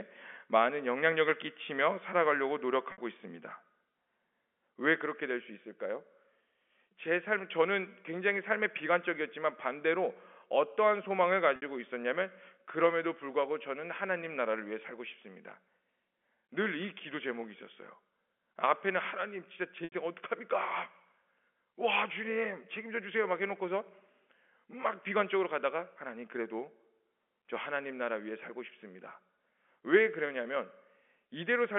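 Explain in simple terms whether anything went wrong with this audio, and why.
Yes. There are three brief packet loss with pitch repetition glitches, at 2.92, 11.56 and 19.84 seconds, each lasting 60 to 80 ms. The receiver filled each gap by repeating the last bit of voice, so you hear a short buzzy hold.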